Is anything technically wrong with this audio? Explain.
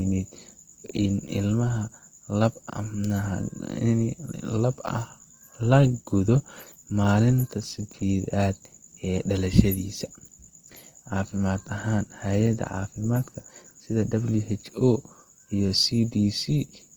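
Yes. Throughout the speech, the sound shows Opus compression, likely in its CELT music mode at a low rate that fits about 24 kbps. Short of bits, the encoder fills bands with folded or noise content, so tones turn grainy and rough, though the band still reaches 20.2 kHz.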